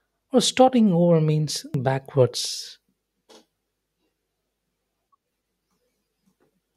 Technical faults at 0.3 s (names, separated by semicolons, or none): none